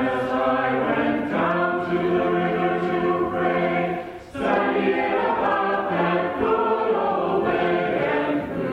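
Nothing goes wrong anywhere in this audio, so there's no fault to point to at any moment.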